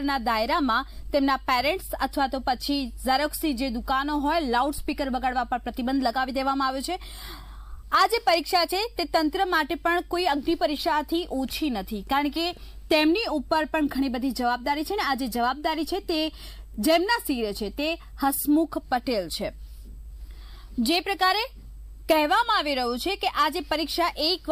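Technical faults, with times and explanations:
Nothing technical jumps out here; the audio runs along without any faults to flag.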